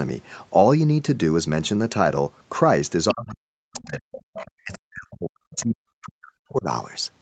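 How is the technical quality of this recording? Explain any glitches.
The recording has two related echo-control faults in the middle of the speech, from about 3.1 s to 6.7 s. The audio is band-limited to 8 kHz, as a call path typically is.

Other side's voice leaking through occurs at 3.09–3.14 s, 3.74–3.86 s, 4.12–4.51 s, 4.73–4.77 s and 5.51–5.66 s. The likely cause is a loudspeaker on the talker's device playing the far end, with the echo canceller leaving a residue in the microphone signal. A faint second voice surfaces in short scraps, roughly 15 to 25 dB below the main speech. The longest stretch follows 4.12 s.

Speech suppressed in double talk occurs at 3.13–4.12 s and 4.53–6.66 s, about three seconds in all. When both sides talked together, the echo canceller likely could not tell the near talker from the returning echo and turned everything down. The main voice dips steeply, as much as around 40 dB at its deepest.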